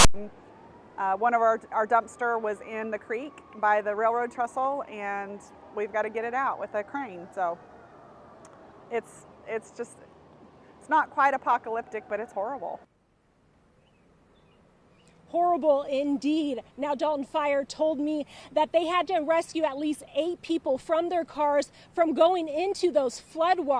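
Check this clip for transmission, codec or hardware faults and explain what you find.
There is one fault, at the very start. From 0.00 to 0.14 s the clip opens with file tags played as audio. A block of text metadata at the head of the file has been decoded as if it were samples. The character bytes become a loud, harsh rasp pushed off-centre, offset to one side of zero. The zero padding after the text then plays as dead silence. The burst starts and stops with hard edges before the real sound begins.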